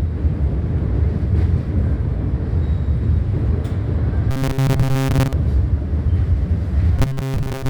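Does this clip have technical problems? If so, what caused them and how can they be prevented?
Yes. From 4.31 to 5.34 s and again from 6.99 s to the end at 7.69 s, the sound collapses into robotic sound from repeated short buffers: a rigid, metallic buzz at 134 Hz. The likely cause is audio arriving too seldom, with the player looping a segment of about 7.5 ms to fill most of the time while real audio is skipped. Unlike dropouts, there are no silent gaps, and unlike flanging, the pitch stays fixed instead of sweeping. Larger playback buffers and steadier delivery prevent it.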